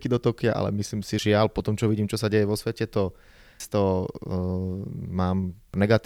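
A speech recording with damaged data in a compressed stream at three points: 1.19 s, 3.60 s and 5.74 s. Each is a brief chirp or blip where corrupted bytes made the decoder misread a frame, lose sync and hunt for the next valid frame header. On a spectrogram each shows as a thin vertical smear of broadband or oddly tonal energy, and in the waveform as a sharp, momentary break in the speech envelope.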